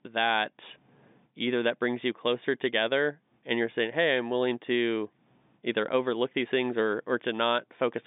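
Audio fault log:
No fault to log for this audio.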